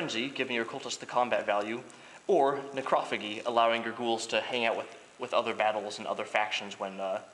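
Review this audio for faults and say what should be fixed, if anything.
Nothing in the audio needs fixing. No technical faults can be heard at any point, so no changes are called for.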